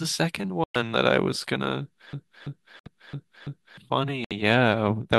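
At 0.64 to 0.76 s, a corrupt frame muted fault cuts the speech to abrupt silence. The decoder rejected damaged compressed frames, and the player filled the gap, a few frames long, with nothing.

From 2.13 to 3.78 s, a broken-record loop takes over. A 334 ms fragment repeats exactly, five times back to back. The stream likely stalled and kept resending its last piece.

Within the loop, the sound drops to silence again at 2.79 to 2.87 s. Another muted gap follows at 4.24 to 4.32 s.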